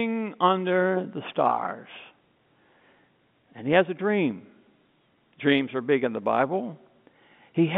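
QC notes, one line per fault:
No faults are present in the speech signal, which carries the narrow line band of G.711 telephone coding, running from 150 Hz to 3.6 kHz.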